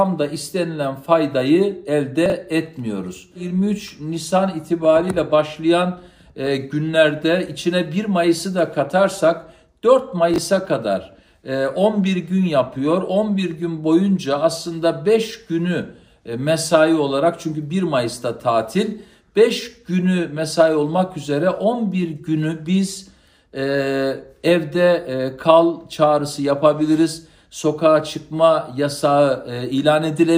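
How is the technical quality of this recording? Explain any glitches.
Two short glitches stand out, both chunks out of order. At 2.26 to 2.32 s, a 20 ms chunk turns up two chunks late, and at 10.34 to 10.38 s another arrives one chunk late. Nothing goes missing; the audio just plays in the wrong sequence, so each spot has three hard joins where the waveform doesn't line up. You hear a quick jumbled stutter at each one.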